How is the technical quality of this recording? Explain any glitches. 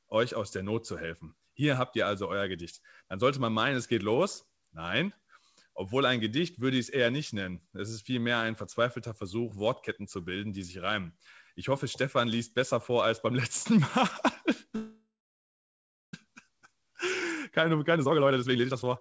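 The speech passes through a wideband call link with nothing above 8 kHz, and two glitches stand out near the end.

Call audio freeze, 14.76 to 16.14 s: the last sound stretches into a fading buzz or hiss, then about 1.07 s of silence, before the speech resumes where it stopped. Packets were likely delayed until the jitter buffer emptied. A spectrogram shows a smeared band decaying into a blank gap, with no speech lost.

Jitter buffer speed-up, 17.5 s to the end: the speech runs about 137% fast at an unchanged pitch and sounds rushed. After the stall, the receiver trimmed pitch-period-sized slices, roughly half a second in total. Harmonic spacing stays constant while syllables compress horizontally on a spectrogram.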